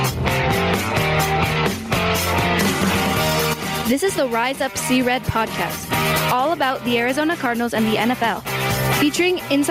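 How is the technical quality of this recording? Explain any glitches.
The recording suffers from gain pumping across its whole length. The level is pulled down each time a loud sound arrives, swinging by around 20 dB. Loud and quiet passages sit unnaturally close together, and the result sounds squashed and breathing. The likely cause is input gain set far too high, with a fast limiter or compressor clamping down on each peak and releasing in between.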